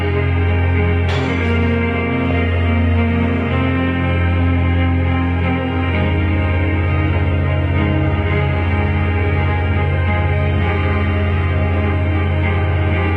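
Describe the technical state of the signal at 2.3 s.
At 2.31 s a brief burst of burbling breaks over the sound. This is DAB burbling: weak reception let a small fraction of a percent of bit errors slip past error correction, corrupting MP2 samples so individual sub-bands carry short blips of noise.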